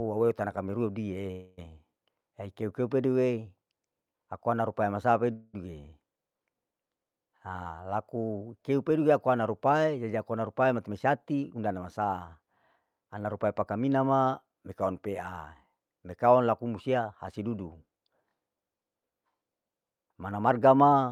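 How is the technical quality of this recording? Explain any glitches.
The recording has two kinds of call-network glitch, each occurring twice.

Call audio freeze, 1.31 to 1.59 s and 5.33 to 5.55 s: delayed packets likely drained the jitter buffer, so the last sound was stretched into a fading buzz or hiss for about 0.26 s and 0.21 s. The audio then resumed where it stopped, with nothing lost.

Jitter buffer speed-up, 10.77 to 12.01 s at 107% and 19.83 to 20.48 s at 112%: to shrink an overfull buffer, the receiver repeatedly trimmed pitch-period slices, about a tenth of a second in each stretch. The speech sounds hurried but keeps its pitch.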